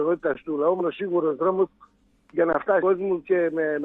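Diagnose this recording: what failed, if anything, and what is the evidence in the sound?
Buffer stage: underrun with held sample at 0.34 s and 2.53 s. The sound freezes flat for 16 ms, then resumes where it stopped.

Codec stage: damaged data in a compressed stream at 0.76–0.82 s and 2.78–2.83 s. The decoder misreads corrupt frames and resyncs, producing a brief glitch of about 50 ms and 40 ms.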